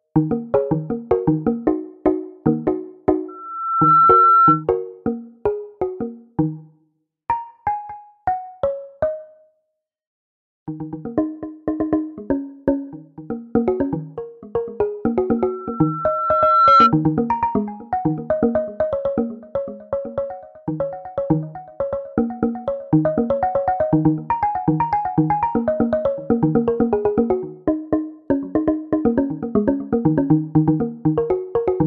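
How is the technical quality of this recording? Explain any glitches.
The recording is marred by two bursts of loudspeaker feedback squeal, from 3.28 to 4.64 s and from 15.38 to 16.94 s. Each time, the microphone picks up its own loudspeaker and the loop gain tops unity at 1.3 kHz, so that tone swells, in under a second the first time and over about a second and a half the second, to roughly 10 dB above the surrounding sound. A spectrogram shows a bright horizontal line at 1.3 kHz, and the waveform bulges into a growing envelope.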